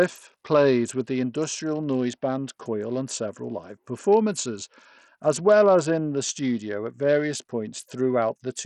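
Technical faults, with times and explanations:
Throughout, Bluetooth SBC compression, heavy: the speech has a gritty, grainy edge and the top end keeps dropping out or flickering. That's likely a starved SBC bit pool, which fits a bitrate around 64 kbps, so the upper sub-bands go unfunded and everything else is coarsely quantised, leaving aliasing riding on the sound.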